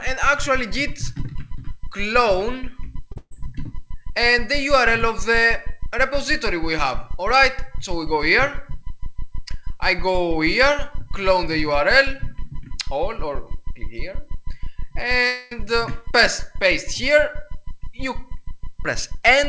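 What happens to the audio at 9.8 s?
Nothing goes wrong at 9.8 s; the audio carries on intact through that moment, with only the steady call-path band limit at 8 kHz that runs through the whole clip.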